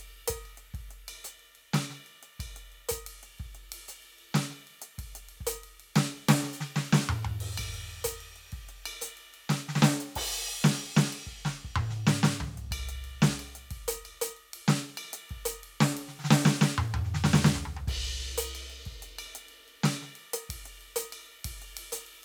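No technical faults turn up anywhere in this music recording, and the signal holds steady throughout without any dropouts, glitches or other disturbances.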